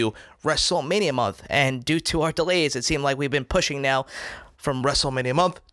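Wrong sample rate from 0.75 to 4.81 s: the speech runs about 1.09 times fast and 1.47 semitones high, which fits 22 kHz material played back at 24 kHz.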